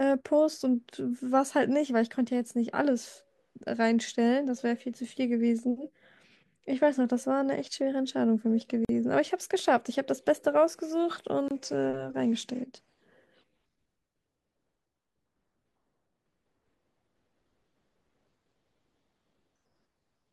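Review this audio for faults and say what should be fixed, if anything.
Two gaps at joins of encoded pieces interrupt the speech, at 8.85–8.89 s (about 43 ms) and 11.48–11.51 s (25 ms). Separately encoded segments were joined with their leading encoder delay and final-frame padding left in. Each appears as a vertical break across all frequencies, smeared at the edges. Trim encoder delay and padding using the stream's gapless metadata before concatenating, or encode the whole programme in one pass.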